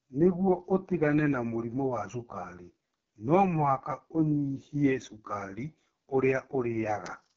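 Speech run through the AMR wideband (HD Voice) codec the whole way, sounding rough and raspy with nothing above 6.3 kHz, which fits its lowest 6.6 kbit/s mode.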